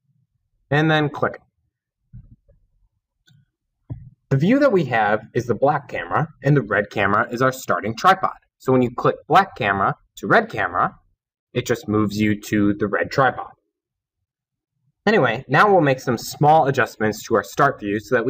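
Nothing in the audio stood out as a technical fault on listening.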